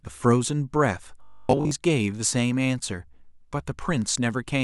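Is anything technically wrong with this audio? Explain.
Yes, from 1.23 to 1.71 s there's robotic sound from repeated short buffers. Audio likely arrived too slowly, so the software kept looping a tiny chunk for most of that stretch instead of playing new audio. That forces a rigid 50 Hz buzz, which fits a 20 ms buffer, and the speech turns metallic.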